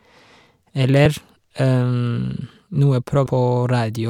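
Compressed frames were skipped at 1.05 s and 3.25 s. The decoder lost whole frames, so the speech jumps forward, about 50 ms at first, then roughly 300 ms, which fits a 24 ms frame size.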